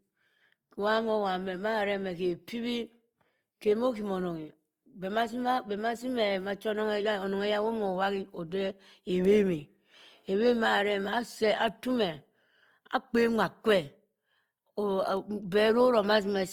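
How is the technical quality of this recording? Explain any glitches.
The recording is clearly degraded by lossy compression, audible from start to finish.

Opus compression runs through the entire clip. The speech sounds grainy and rough, most likely from Opus in its music (CELT) mode at a low rate, around 24 kbps. The encoder preserves each band's energy but, short of bits, fills band detail with folded lower bands or noise, so voiced tones turn coarse and hissy. Unlike MP3, there is little swirling or watery holing, and the full bandwidth remains rather than sounding muffled.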